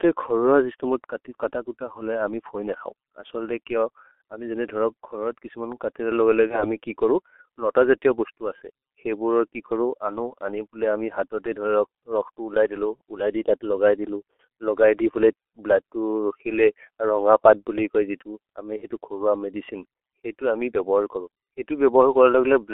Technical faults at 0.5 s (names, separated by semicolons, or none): G.723.1 codec